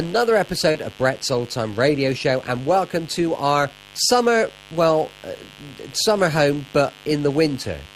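From the very start there's a mains buzz sitting under the speech, a raspy 50 Hz hum with a crackly edge, a fair way below the voice. That's switching spikes from something like a dimmer or poorly shielded supply leaking in, with harmonics stacking up into the kilohertz range.

Around 0.71 to 0.77 s you get a short concealed packet loss: roughly 40 ms of audio never arrived, and the receiver papered over about 32 ms of it by extending the preceding sound before blending back, so it comes across as a quick smear or wobble.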